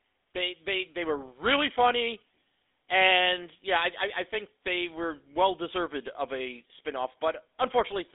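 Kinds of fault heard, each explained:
GSM full-rate codec: The whole clip runs through the original GSM full-rate speech coder. It models the vocal tract and excites it with a coarse, regularly spaced pulse train, so the speech takes on a buzzy, gravelly roughness that is plainly audible throughout. The sound is confined to a phone-line band of about 300 Hz to 3.6 kHz, with nothing above 3.8 kHz. The result is thin and muffled, which fits a 13 kbps GSM link.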